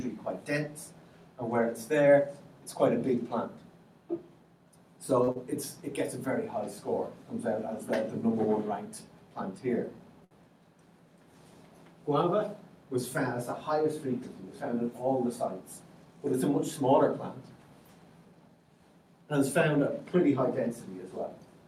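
A short stall from a late packet comes at 5.23 to 5.29 s. A packet arrived late, so the jitter buffer ran dry and the receiver held the last sound for 40 ms before resuming from the same point. Nothing is lost, but the sound hangs slightly with a slight buzz or dip.

Short concealed packet loss follows at 5.31 to 5.37 s. About 40 ms never reached the decoder in time, and the receiver bridged the gap by extending the preceding sound for 39 ms before blending back, leaving a brief smear or wobble where real audio is missing.

A second short stall from a late packet occurs at 10.24 to 10.33 s, longer this time. The buffer emptied again and the last sound was stretched for 65 ms until the packet came, producing a held moment with a slight buzz or dip.

A jitter buffer speed-up runs from 18.25 to 18.65 s. With too much audio queued, the receiver trimmed repeated small pitch-period slices, roughly 70 ms in total, so the sound plays about 14% faster at unchanged pitch and feels briefly hurried.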